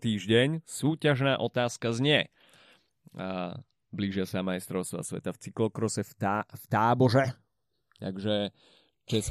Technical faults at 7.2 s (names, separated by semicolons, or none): channels drifting apart